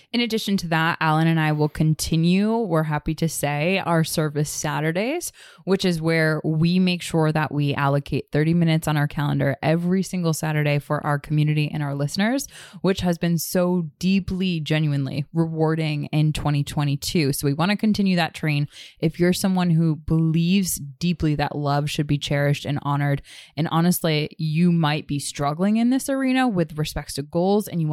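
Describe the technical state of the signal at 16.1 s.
At 16.1 s the speech signal is intact, with no audible fault at that moment.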